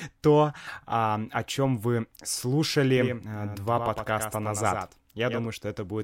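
Speech with a doubled audio track from 2.97 s to 5.45 s: a second full-band copy trails about a tenth of a second behind, a few dB quieter, likely from a slower parallel capture path. Unlike room echo, it has no decay or room colour and switches on and off abruptly.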